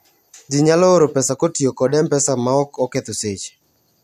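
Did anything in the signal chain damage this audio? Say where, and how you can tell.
No, nothing in the chain audibly damages this speech recording at any stage.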